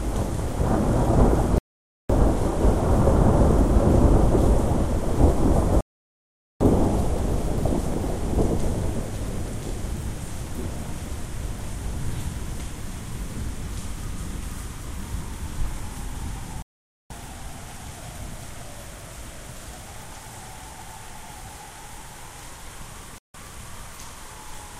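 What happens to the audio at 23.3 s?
At 23.3 s the clip has a digital broadcast dropout. The receiver stopped getting usable frames, either because the signal was lost or because frames failed their checksum, so it muted until valid frames arrived again. From 23.18 to 23.35 s the sound cuts or rapidly fades to silence for about 160 ms, which fits a handful of lost frames, and then returns further along. Whatever was transmitted during that gap is gone.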